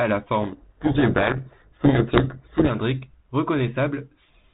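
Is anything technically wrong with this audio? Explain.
Yes. From 0.42 to 2.71 s there's a codec payload misread: the G.726 code words arrive with their bit order flipped, so the decoder buries the speech in harsh distortion.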